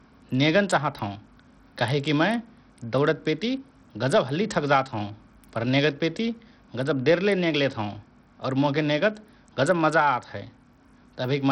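Bluetooth SBC compression damage runs through the whole of this speech recording, from start to finish. The treble is missing above about 16.3 kHz, and what remains sounds heavily processed and gritty, as though the codec was likely starved of data at a rate that fits roughly 64 kbps. With so few bits to share, SBC's fixed sub-bands leave the upper range empty and quantise the rest coarsely, so grainy noise and aliasing cling to the speech.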